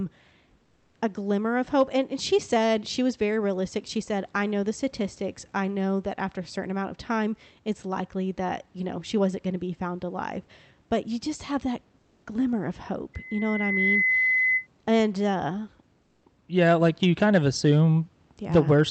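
Right at the start, from 0.63 to 0.95 s, just before "a glimmer of hope", the room background drops out and a smooth, featureless hiss takes its place, about 3 dB quieter than the real room sound. That's comfort noise in place of the background, most likely the sender going quiet under discontinuous transmission, which fits Opus DTX, while the receiver fills the gap with synthetic noise. It happens again from 11.99 to 12.23 s, between "you just have that" and "glimmer of hope", this time at the same level, so you catch it mainly as the background briefly losing its texture.

Then, from 13.14 to 14.67 s, right after "that glimmer of hope", a loudspeaker feedback squeal kicks in. The loop between speaker and mic runs away at 2 kHz, and that single tone swells over something like 0.7 s into a piercing whistle that ends up sitting a little above the speech level.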